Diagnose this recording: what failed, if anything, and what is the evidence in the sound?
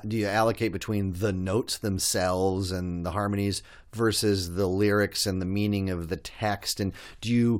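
No stage shows a fault.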